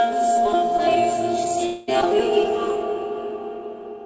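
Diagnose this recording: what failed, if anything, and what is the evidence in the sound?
Network stage: from 1.66 to 1.89 s the sound smears into a fading buzz, and when it resumes about 0.22 s is simply gone. That's the receiver stretching its last audio across a likely long network dropout, on a call path topping out at 8 kHz.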